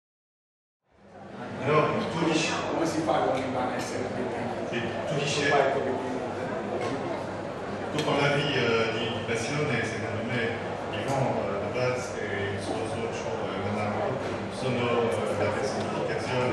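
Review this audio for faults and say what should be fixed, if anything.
Nothing stood out on listening that needs fixing, and the gentle fade-in over the opening, from around one second to 2.2 s, sounds like a deliberate edit.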